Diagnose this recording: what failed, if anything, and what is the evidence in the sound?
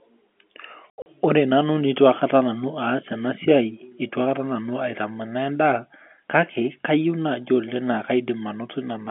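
Network stage: packet loss filled with silence. Between 0.90 and 1.06 s the speech is cut by hard-edged holes totalling 120 ms, the longest 80 ms, which fits lost 20 ms packets. Unlike concealed loss, nothing fills the gaps, just abrupt digital silence.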